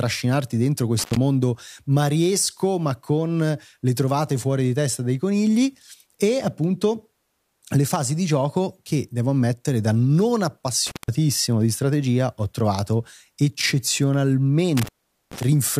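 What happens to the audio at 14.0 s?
Nothing goes wrong at 14.0 s; the speech continues cleanly through that moment with no dropout, click or distortion.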